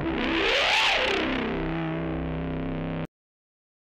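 At 3.05 s the audio has a cut-off end: the final stretch of buffers was never written or played, so the sound stops mid-event and falls straight to digital silence with no natural decay, holding that silence through to the end.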